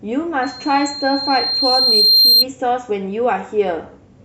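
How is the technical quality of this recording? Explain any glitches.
One fault spoils this speech recording. From 0.42 to 2.45 s there is loudspeaker feedback squeal: the microphone re-amplifies its own loudspeaker, so a 4.2 kHz tone swells over about two seconds to roughly 10 dB above the speech. Unlike a steady hum or whine, it keeps growing.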